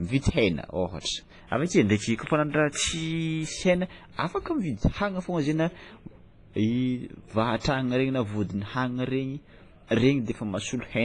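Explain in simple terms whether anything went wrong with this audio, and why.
The speech has a heavily washy, ringing quality the whole way through, and nothing is left above about 10.5 kHz. That points to WMA compression as the likely cause: the encoder squeezed the sound hard, smearing noise around and throwing away the top end.

You'll also catch pre-echo at 1.0 s, 4.16 s and 7.6 s: a short hiss, about 30 to 50 ms long, creeps in just before a sharp attack. The codec spreads its noise across a whole block, so it leaks ahead and softens the hit.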